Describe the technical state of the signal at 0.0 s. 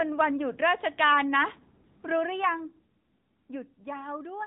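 At 0.0 s the speech is already passing through AMR narrowband mobile codec coding, which lasts the whole clip. Nothing above about 3.8 kHz survives, and the pulse-driven vocal-tract model gives a plainly audible buzzy, synthetic quality, consistent with a mid-rate mode near 10 kbps.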